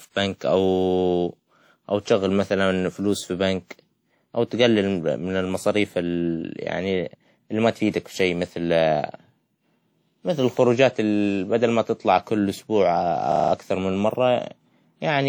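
A system hang loop at 13.32 to 13.52 s interrupts this speech recording. A single 40 ms slice of audio repeats exactly five times, giving a rapid stutter at a rate of 25 Hz. This is the sound hardware cycling through the same ring buffer while the computer or driver has frozen, so the one short block keeps replaying until the system recovers. Playback then picks up again with essentially no audio missing. Transcoding between lossy codecs runs through the whole clip. The sound carries a mixture of compression artefacts of two different characters layered on top of each other, and nothing is present above 20.4 kHz. The likely cause is a chain in which the audio was first coded as WMA at 48 kbit/s and then re-encoded as HE-AAC at 48 kbit/s. The second encoder spent part of its limited bit budget reproducing the first codec's errors and then added its own, so both sets of artefacts are heard together.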